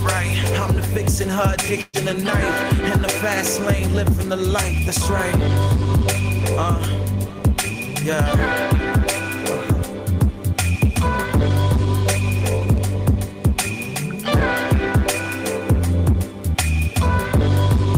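At 1.81 s a burst of packet loss drops about 120 ms; the receiver stretches and fades the last sound, briefly silent, before audio resumes at 1.96 s.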